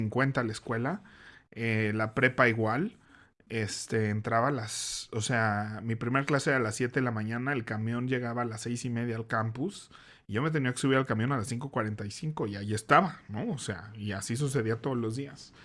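Nothing is technically wrong with this speech recording.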